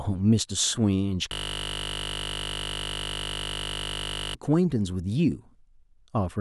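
A system hang loop runs from 1.33 s to 4.35 s. For about three seconds, a single 20 ms slice of the speech repeats exactly, roughly 150 times in a row. The computer or its audio driver stopped supplying fresh samples while the sound hardware kept replaying whatever sat in its ring buffer, which fits a buffer about 20 ms long. Because the slice is so short, the repetition fuses into a steady, flat buzz at 50 Hz.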